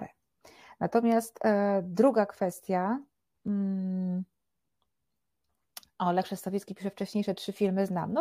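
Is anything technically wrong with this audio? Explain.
Yes, there are three sharp clicks in the speech, at 2.53 s (just after "e druga"), 3.48 s and 6.61 s. Each is likely dropped samples: a handful go missing, the waveform jumps, and you hear a brief tick.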